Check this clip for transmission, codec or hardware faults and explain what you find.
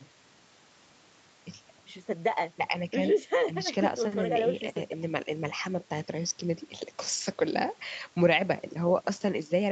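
Nothing stood out on listening to this speech, which sounds the way audio carried over a normal Opus call path should, with its content stopping at about 8 kHz.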